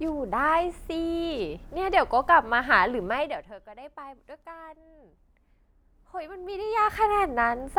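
From 3.04 to 3.55 s, zipper noise ticks. The level falls about 20 dB in unsmoothed 1 dB steps, around forty a second.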